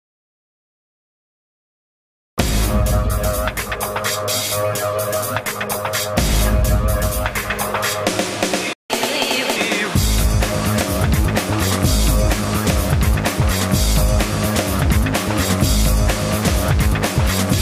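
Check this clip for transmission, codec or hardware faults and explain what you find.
Two playback faults occur back to back, a stall followed by a catch-up burst.

Playback stall, 8.73 to 8.90 s: the audio cuts to silence for about 170 ms in mid-flow. The likely cause is the player's buffer running dry or its audio thread being blocked, so nothing was delivered to the output until it recovered. The gap sounds like an abrupt hole in the sound.

Catch-up at higher speed, 8.90 to 9.56 s: right after the stall, the player works off its backlog by resampling at 1.25 times normal speed. Because resampling changes rate and pitch together, the sound runs noticeably faster and rises by roughly four semitones for about two thirds of a second. It then drops back to normal speed and pitch once the lost time is recovered.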